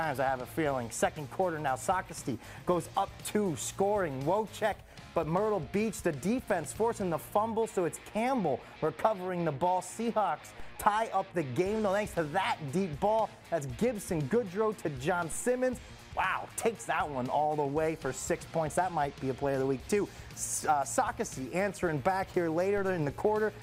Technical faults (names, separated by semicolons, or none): DC step